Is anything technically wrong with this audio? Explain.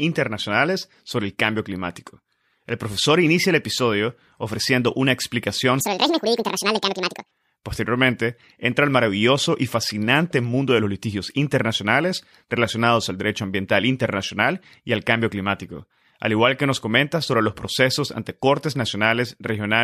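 Yes, there's one. From 5.80 to 7.31 s there's a section at the wrong speed. The speech suddenly runs 1.84 times too fast, jumping up around ten semitones and sounding hurried and chipmunk-like, then snaps back. That stretch was likely played out against the wrong clock.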